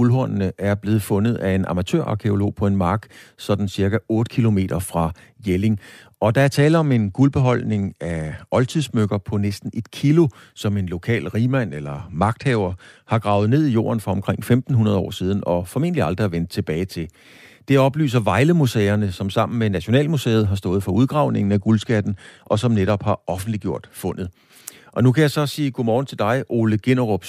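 From 6.45 to 8.99 s, 11.69 to 13.47 s and 21.28 to 24.19 s, the speech turns dull and gritty. Each is a Bluetooth SBC bit pool drop. The top bands lose their bits, and the rest are quantised coarsely. The sound points to a bit pool falling from 31 to 13, near 94 kbps.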